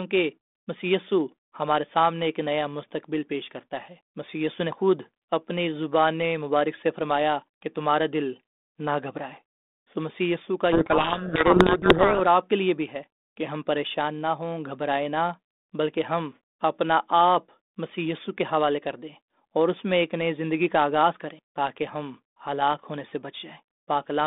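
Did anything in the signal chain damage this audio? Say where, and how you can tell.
Yes, at the codec stage: from 10.72 to 12.21 s the speech sinks under harsh, grinding distortion, then snaps back. That's a codec payload misread. The receiver unpacked the G.726 code words in the wrong bit order, so each sample's prediction difference came out scrambled.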